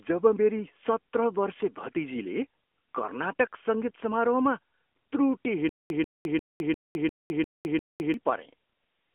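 From start to finish the speech carries the AMR narrowband mobile codec sound: nothing above about 3.6 kHz, thin lows below 250 Hz, and a plainly buzzy, synthetic edge, which fits a mid-rate mode near 10 kbps. That coded buzz, not just a narrow band, separates it from plain telephone filtering.

From 5.69 to 8.14 s comes a stutter with silent gaps. The same 141 ms burst returns seven times, every 350 ms, with about 209 ms of digital silence between, most likely a stalled stream replaying its last fragment. The exact repeats distinguish it from random dropouts.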